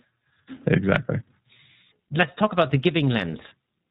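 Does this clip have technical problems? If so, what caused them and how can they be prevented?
Yes. Throughout this speech clip the iLBC codec is plainly audible: everything above 4 kHz is gone, and the sound is rough and slightly synthetic, which fits 13.33 kbps coding in 30 ms frames, each frame's excitation coded independently. Prevent it by using a wideband codec or higher-quality path.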